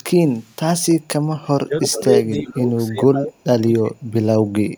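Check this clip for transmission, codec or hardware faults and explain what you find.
Two kinds of fault are present: echo leak and speech suppressed in double talk.

Echo leak, 0.28 to 0.56 s and 1.82 s. A copy of the speech returns 328 ms late, faint at first, then more audible. The likely cause is an echo canceller passing loudspeaker pickup.

Speech suppressed in double talk, at 1.6 to 2.0 s, 2.17 to 2.22 s, 2.4 to 2.7 s, 2.89 to 4.03 s and 4.51 s to the end. The speech dips, sometimes by about 30 dB. It likely comes from an echo canceller turning down its own talker along with the loudspeaker echo.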